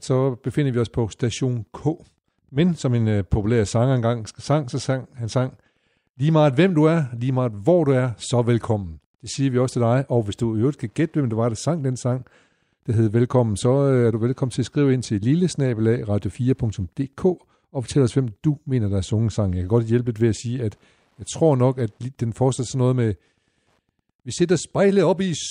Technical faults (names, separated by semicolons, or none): Wi-Fi interference